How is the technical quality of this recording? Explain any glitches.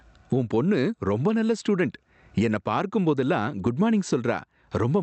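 The recording suffers from gain pumping through its whole length. The gain swings by roughly 25 dB. The likely cause is input gain set far too high, with a fast limiter or compressor clamping each loud syllable. The speech sounds squashed, with loud and soft passages pressed close together. A noise gate would pull the pauses down toward silence, whereas pumping raises quiet parts in the gaps, and that separates the two. The sound also passed through a call codec limited to about 8 kHz.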